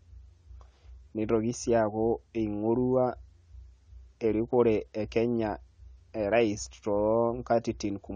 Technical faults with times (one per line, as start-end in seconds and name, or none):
0.00-8.15 AAC compression